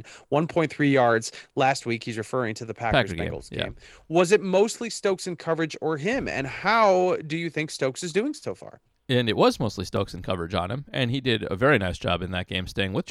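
A block of digital silence at 9.97 s, between "and it was mostly" and "and coverage on him", zeroes about 1.5 ms of speech, heard as a tick.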